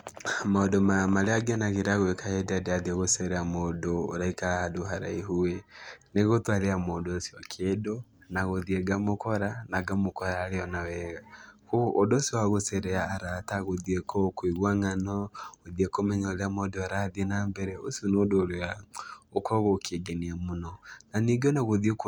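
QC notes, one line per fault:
No fault found, so there is nothing to list, one line per fault or otherwise.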